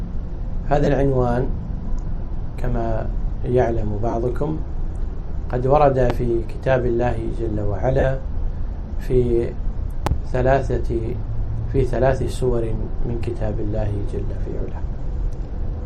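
Lost LE Audio frames hit the Bluetooth link four times: at 0.84 to 0.87 s and 4.11 to 4.13 s (about 22.5 ms each), 7.99 to 8.04 s (45 ms) and 14.40 to 14.44 s (30 ms), lengths that fit runs of 7.5 ms frames. The LC3 decoder patches each gap by repeating the last spectrum with scrambled phase, so the audio briefly turns into a hissy, smeared blur. A loud pop, likely a voltage step from a switch, plug, static or driver glitch, lands at 6.10 to 6.13 s as a single sharp crack roughly 15 dB above the audio. A double pop follows at 10.07 to 10.14 s at the same level. The sound continues underneath both.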